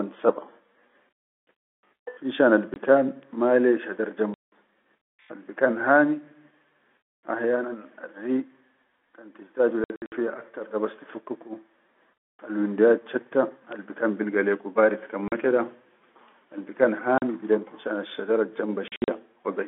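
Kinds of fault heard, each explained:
Packet loss filled with silence: Stretches of the signal drop out completely and are replaced by dead silence, with abrupt edges. Every gap is a multiple of 20 ms, which fits 20 ms packets. The first, just before "mala shadar", lasts 20 ms. A solid 180 ms hole follows at 4.34 s, after "mala shadar". Near 9.84 s and 18.88 s the holes scatter as short bursts, none longer than 60 ms. Two more 40 ms holes fall at 15.28 s and 17.18 s.
Bit error spike: A flipped bit in the digital data makes one or two samples jump sharply to a wrong value and then snap back. Each one sounds like a single hard tick spread across the whole spectrum, unrelated to the sound around it. Three occur, at 3.23 s, 13.72 s and 17.96 s. The one at 13.72 s spans two samples. The others are single samples. Each tick is brief.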